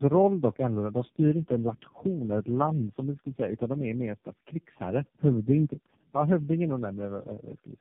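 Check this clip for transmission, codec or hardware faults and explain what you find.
The speech carries tandem speech coding throughout the clip. It passed through three low-rate speech coders in succession, each re-encoding the last one's already degraded output. The pattern fits AMR-NB, then G.729A, then AMR-NB again, with G.711 links between them. Nothing remains above 3.4 kHz, and the roughness, muffling and warble build on one another. That compounded degradation sets it apart from a single low-bitrate codec.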